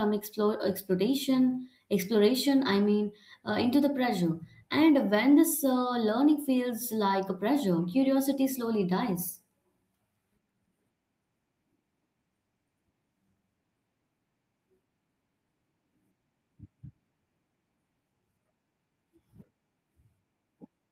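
No technical faults can be heard anywhere in the speech recording.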